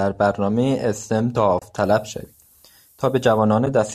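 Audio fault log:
1.59 s and 3.66 s, AAC frame loss with muting: a soft-edged gap in the speech, about 30 ms at 1.59 s and about 10 ms at 3.66 s. Lost frames were decoded as silence, and the overlapping windows fade out and back in, leaving a brief muted hole rather than a hard cut.
1.83–3.39 s, low bit depth with noise shaping: a steady, thin hiss that leans strongly toward the top of the band, sitting roughly 30 dB below the speech. The signal is carried by only 9 bits, and the rounding error is pushed upward in frequency, so the noise collects high instead of spreading evenly.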